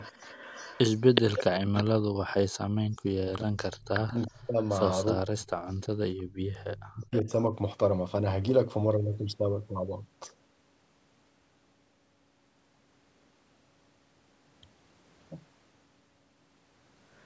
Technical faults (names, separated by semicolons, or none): echo leak; speech suppressed in double talk